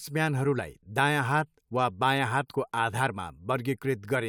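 Listening closely to the speech, nothing stood out as a technical problem at any point.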